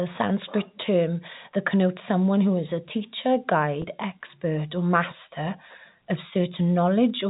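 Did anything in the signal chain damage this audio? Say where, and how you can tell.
Yes. At the network stage there is packet loss with pitch repetition from 3.82 to 3.84 s, between "who is a teacher" and "expert or master of". About 20 ms went missing, which fits a single lost packet. The receiver bridged it by repeating the last pitch period, so it sounds like a brief buzzy hold. A plain dropout would leave a silent gap or click instead. The G.711 telephone coding band limit at 4 kHz is audible but undisturbed.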